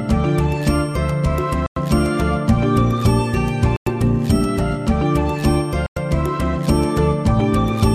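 At 1.66–1.76 s, 3.76–3.86 s and 5.86–5.96 s there is a gap between chunks: 100 ms of silence at each join between 2-second blocks, heard as abrupt holes. The waveform drops to near silence, and the spectrogram shows empty vertical bands.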